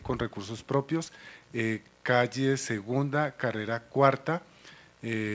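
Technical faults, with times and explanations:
No technical faults can be heard in this clip. It has come through a WebRTC call path whose band stops at 8 kHz, with no content above that, which fits a wideband call codec such as G.722.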